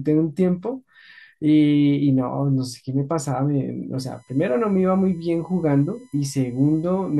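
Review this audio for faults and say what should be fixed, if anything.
A USB whine enters at 3.99 s and runs to the end of the clip at 7.20 s. It is a fixed-pitch tone built on 1 kHz, and its strongest component is the 13 kHz harmonic. It sits roughly 40 dB below the speech. The USB bus draws current in 1 ms frames. That pulsing leaks into the audio through shared power or ground. To prevent it, isolate the interface's power and ground from the USB supply, for example with a ground-loop isolator or a powered hub.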